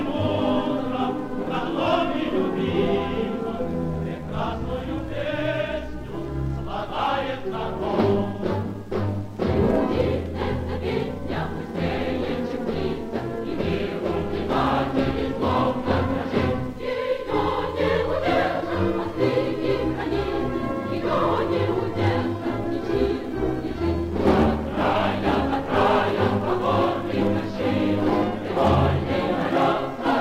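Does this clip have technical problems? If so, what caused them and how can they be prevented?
No, nothing stood out as a technical problem on listening to this clip, so there is nothing to trace back or prevent.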